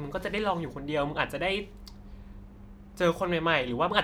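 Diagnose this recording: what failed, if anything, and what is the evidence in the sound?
Listening through this speech recording, nothing stood out that would point to a failure at any stage.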